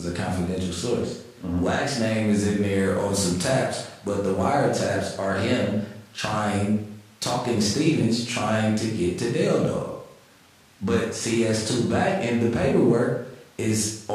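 No technical faults are audible.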